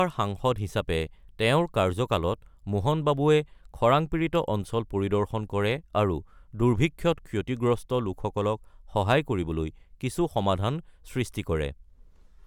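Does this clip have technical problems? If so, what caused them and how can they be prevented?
No, there are no faults.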